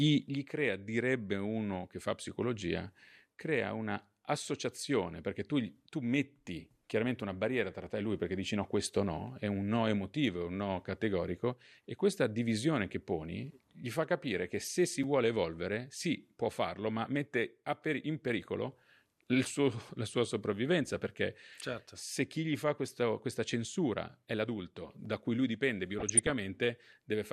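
DAB burbling in this speech recording, at 14.61 to 14.69 s (between "gli fa capire che" and "si vuole evolvere sì"), 20.90 to 21.18 s and 25.99 to 26.33 s (after "da cui lui dipende"), comes from weak reception. Bit errors on the order of a few tenths of a percent slip past error correction and corrupt MP2 sub-band data, producing short blips of noise in single sub-bands. A block of digital silence at 15.03 s, just before "vuole evolvere sì può", is a 5.3 ms zeroed gap, which fits a 256-sample buffer not filled in time, heard as a tick or dip.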